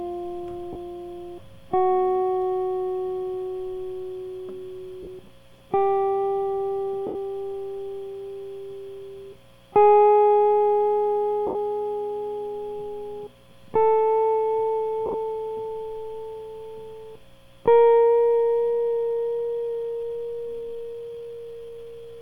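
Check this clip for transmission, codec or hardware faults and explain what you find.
The music has two faults: repeated Bluetooth dropouts and a slowed passage at the end.

Lost LE Audio frames at 0.73–0.76 s, 5.03–5.07 s, 7.07–7.15 s, 11.47–11.55 s and 15.06–15.14 s: the LC3 decoder concealed the missing frames by recycling the last spectrum with scrambled signs. The gaps turn tones into a brief noisy smear.

Time-stretched section from 18.69 s to the end: the audio plays at about 0.67 times its speed with unchanged pitch, likely from software repeating short pieces, so it drags.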